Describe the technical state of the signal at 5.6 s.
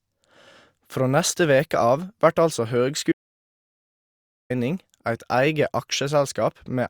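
At 5.6 s the speech signal is intact, with no dropout, distortion or other technical fault.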